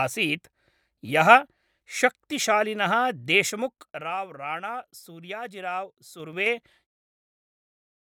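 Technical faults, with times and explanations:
3.41–4.16 s, zipper noise: the level drops by roughly 15 dB in hard 3 dB jumps, about five a second, and each jump leaves a small tick instead of a smooth slide.
6.13–6.71 s, zipper noise: the same stepping on the way back up, roughly 15 dB in 3 dB steps at around seven a second, so it zips audibly just before the smooth fade-out near the end.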